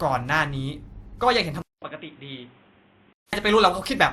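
Throughout, the speech carries two layers of compression smearing at once, though it still extends to 20 kHz. This is likely transcoding between lossy codecs, consistent with a WMA encode re-encoded as Opus.

At 1.62 s a 200 ms silence opens a stretch to 3.33 s that is duller, with nothing above 3.8 kHz, about 5 dB quieter, and carries new noise about 30 dB down. The input had likely switched to a poorer device.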